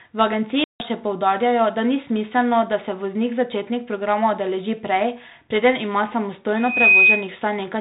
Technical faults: packet loss on an ADPCM call; loudspeaker feedback squeal

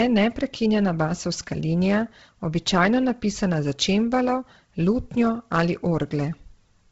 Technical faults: Bluetooth LC3 compression

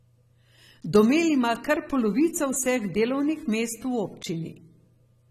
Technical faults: AAC compression

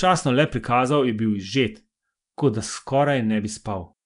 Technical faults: Nellymoser compression

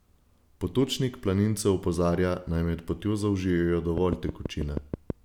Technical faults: train of clicks

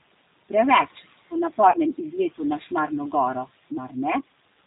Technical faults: channel delay (comb filtering); noise suppressor artifacts; G.729 codec; VoIP packet loss concealed by the speech codec

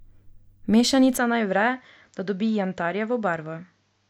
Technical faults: input switched to a poorer device

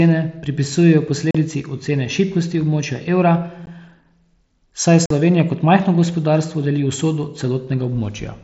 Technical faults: unconcealed Bluetooth headset packet loss

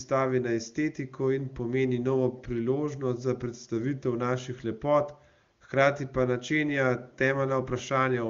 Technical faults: none

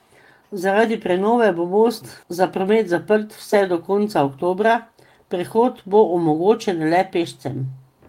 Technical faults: none

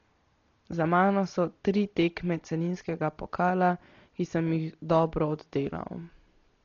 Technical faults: Dolby Digital compression

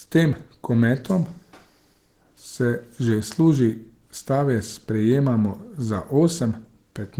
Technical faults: Opus compression

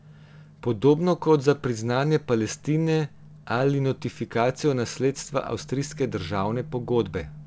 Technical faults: none

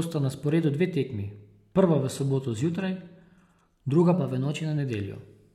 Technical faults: adaptive stream at a lower bitrate; drift correction step

